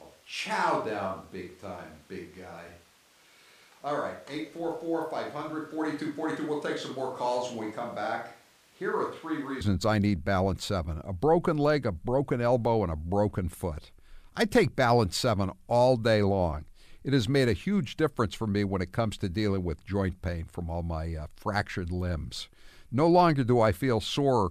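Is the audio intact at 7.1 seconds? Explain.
No. A switch to a distant microphone is under way from the start until 9.61 s, just before "I need". The close microphone's signal was likely lost, so the speech sounds roomy, hollow and thin, about 10 dB quieter, with background noise around 30 dB below it.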